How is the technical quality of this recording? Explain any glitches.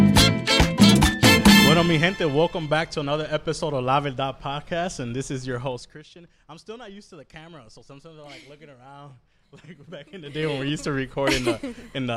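Two rough spots, both zipper noise from the level being stepped. From 5.65 to 6.02 s the level drops by about 15 dB, and from 10.11 to 10.48 s it comes back up the same amount. Each move happens in 2 dB jumps at roughly twenty per second with no smoothing, so every jump leaves a small click, and you hear a quick ticking zip riding on the sound while the level shifts.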